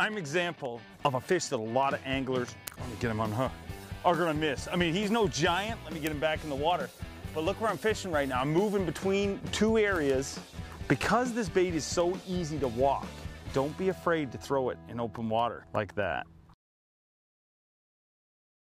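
From 0.14 s to 18.79 s, word clock ticks recur about every 0.2 s, roughly a hundred in all. The receiver runs on its own clock, around 100 ppm off the sender's, so single samples slip. Their steady, metronomic spacing separates them from random clicks or dropouts.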